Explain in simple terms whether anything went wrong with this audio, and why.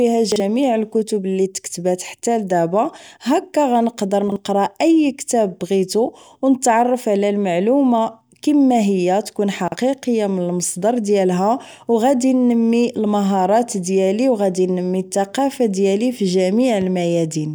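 Chunks out of order: three times, a 40 ms piece of the speech was delivered one slot late and played after the piece that should follow it. Nothing is missing, but each swap makes a brief jumbled moment: at 0.32 s just before "الكتب اللي تكتبات حتى", at 4.28 s just before "اي كتاب بغيتو و", and at 9.68 s just after "كيما هي تكون".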